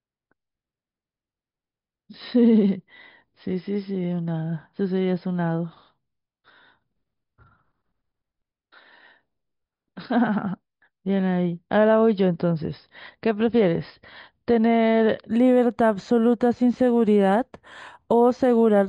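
From 15.31 s to the end, imaging from linear upsampling: straight-line interpolation, consistent with an 11 kHz source, leaves faint 5.5 to 11 kHz mirror images that put a metallic shimmer on sibilants.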